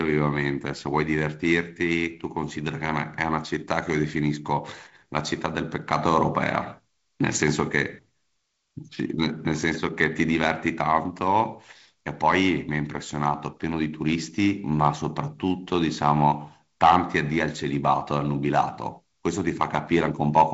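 No faults detected; the speech sits on G.722 wideband coding with nothing above about 7.7 kHz, a light hiss in the upper band and a slightly grainy lower band, consistent with the 48 kbit/s mode.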